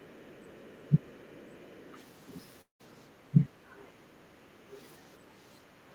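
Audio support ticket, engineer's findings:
Speech suppressed in double talk, 0.14–0.23, 0.68–1.03 and 3.31–3.71 s: speech dips as much as 15–20 dB, likely echo canceller attenuating near-end speech while both sides talk.

Other side's voice leaking through, 0.95–1.92 s: faint second voice roughly 35 dB below the speech, likely residual loudspeaker echo the canceller failed to subtract from the mic.

Background gated by the echo canceller, 1.31–1.59 s (about 7 dB) and 3.76–4.67 s (about 10 dB): room tone pulled down while the loudspeaker is active, released afterwards.

Long network dropout, 2.61–2.81 s: about 180 ms of audio lost, likely a network gap. Receiver concealment extends the last sound briefly, then about 120 ms of silence before the audio resumes without the missing part.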